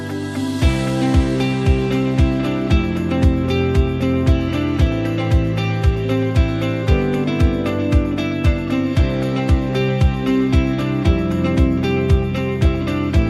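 At 12.65 s, DAB burbling: weak reception let a small fraction of bit errors past error correction, so wrong samples put short blips of noise in single sub-bands and the sound gives a few watery blips briefly.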